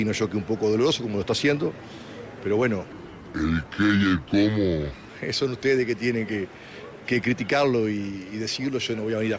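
From 2.92 to 5.09 s, a wrong sample rate fault slows the sound to 0.73x and drops it 5.5 semitones together, fitting 22 kHz audio played at 16 kHz.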